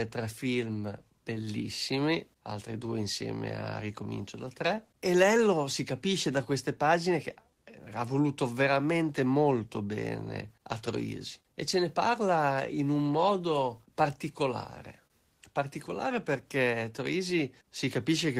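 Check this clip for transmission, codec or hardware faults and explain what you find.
There's a clock problem on this speech, plus one brief stall on top of it.

Clock drift between sender and receiver runs through the whole clip. The sender's clock is about 2% slow compared with the receiver's, so the receiver consumes audio faster than it arrives and the jitter buffer keeps drifting toward empty. Nothing snaps audibly out of place. Instead you get a faint, uneven looseness in the timing, because the receiver has to keep compensating the whole way through.

That compensation is the repeated timing corrections, from 0.44 s to 18.35 s. To stop the buffer running dry, the receiver keeps repeating short slivers of audio, always lengthening and never cutting. Overall the playback runs at 98% speed, and the edits add something like 400 ms in total. Each repeat is tiny and unevenly spaced, so you'd hear it, if at all, as small hiccups or a slightly wobbly pace rather than a clear glitch.

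The short stall from a late packet sits at 15.07 to 15.12 s. A packet didn't arrive on time, the buffer ran empty, and the receiver stretched the last sound by 28 ms until the packet showed up. Then it carried on from where it left off, so nothing is lost. You hear one sound hang a touch too long, maybe with a slight buzzy or dipped quality, and the delay steps up by 28 ms from there.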